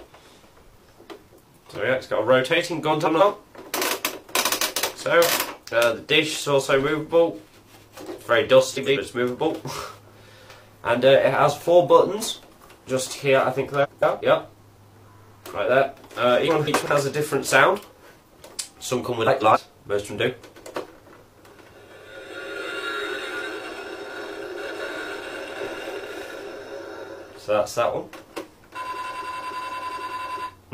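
Seven times, neighbouring runs of frames arrived out of order and were decoded as received: frames out of order at 2.91–3.21, 8.74–8.98, 13.83–14.22, 16.48–16.86, 19.26–19.57, 24.60–24.81 and 29.71–30.10 s. Each stretch plays with its two halves swapped, in blocks of about 93, 139 or 186 ms that suggest runs of two to four frames. The result is a brief garbled flutter, and no time is lost.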